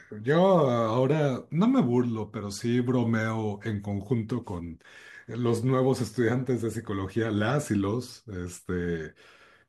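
Sample clock jitter runs through the whole recording: the converter's clock wanders by a few microseconds, so each sample is captured a little early or late and the error scales with how steeply the waveform is changing. The result is a fine hiss and roughness riding on the speech at roughly 40 dB below it, loudest on sibilants and strong peaks, gone in pauses. A spectrogram shows a faint broadband haze tracking the speech energy; the waveform looks normal.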